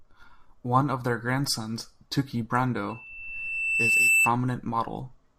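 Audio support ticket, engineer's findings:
Loudspeaker feedback squeal, 2.89–4.32 s: single tone near 2.7 kHz swelling over roughly a second to about 10 dB above the speech. Mic picking up its own speaker, loop gain over unity at that frequency. Spectrogram: bright horizontal line thickening; waveform envelope ramps up.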